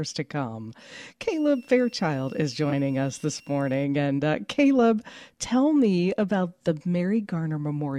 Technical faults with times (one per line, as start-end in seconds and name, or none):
1.29-3.84 switching supply whistle